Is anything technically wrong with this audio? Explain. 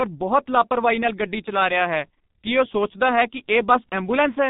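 Yes. Throughout, the speech carries heavy G.723.1 codec damage. At roughly 6.3 kbit/s in 30 ms frames, nothing above 4 kHz survives, so it sounds muffled and hoarse, with smeared consonants.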